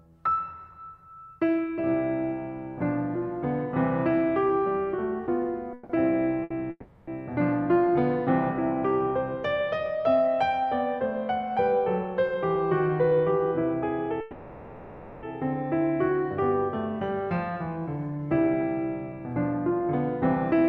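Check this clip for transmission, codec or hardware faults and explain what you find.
Transmission faults are present: the music has three freezes, one short stall and two stretches of speed-up, all typical of packet delay on a call path.

A call audio freeze occurs at 5.73–5.91 s, 6.70–7.09 s and 14.21–15.25 s. Packets were likely held up in transit, so the jitter buffer ran dry and the receiver extended the last sound to cover the wait. That fill lasts 160 ms, 370 ms and about 1 s, fading briefly to silence for 30 ms in the second. The music then resumes where it stopped, with nothing missing and a gap inserted.

A short stall from a late packet occurs at 6.43–6.52 s. One packet missed its slot, so the receiver stretched the preceding sound for 70 ms until it arrived. The result is a held moment with a slight buzz or dip before the music continues from the same point.

A jitter buffer speed-up runs from 11.79 to 14.11 s at 105% speed and from 17.37 to 19.82 s at 106%. 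After the stalls, the buffer was holding excess audio, so the receiver trimmed many tiny pitch-period slices, removing roughly 150 ms in each stretch. The pitch stays the same, but the music sounds hurried and its tempo loses steadiness.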